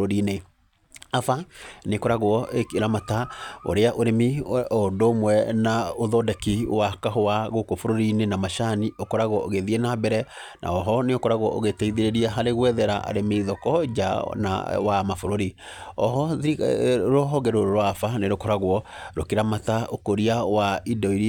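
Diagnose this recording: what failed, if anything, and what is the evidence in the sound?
Nothing failed; no stage shows any audible fault.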